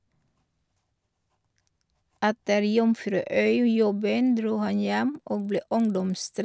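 From 5.15 s on, the resampler restarted on every block: each 50 ms chunk converted alone, so the edges tick as a 20 Hz buzz.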